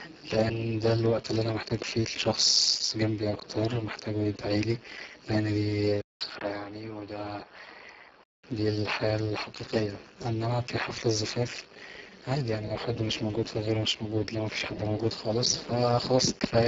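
A Speex codec running at a starved 5.8 kbps carries this speech recording throughout, leaving too few bits for the excitation, so the voice comes through heavily damaged: hoarse, noisy and edging toward robotic, with nothing above 7.8 kHz. From 6.01 to 8.44 s, between "لان دي" and "الحياة الحقيقية انما في", the input was likely switched to a poorer device. After a 200 ms gap the sound turns duller and narrower, cut off above 6 kHz, drops about 5 dB in level and gains a faint new background hiss.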